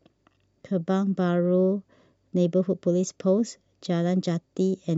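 No audible technical faults here.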